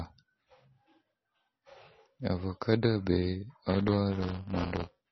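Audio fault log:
throughout, MP3 compression: the speech sounds watery and swirly, with smeared consonant onsets and nothing above 5.9 kHz, which points to a low bitrate near 24 kbps as the likely cause. A spectrogram shows a flat treble cut and flickering holes where weak components vanish.
3.69–5.11 s, buffer tearing: a robotic buzz at 200 Hz rides on the speech to the end because the writer and reader of the audio buffer have slipped. In each period a small slice is replaced by audio about a lap (roughly 10 ms) older. The waveform shows regular hard-edged splices, and the spectrogram shows vertical lines every 5 ms.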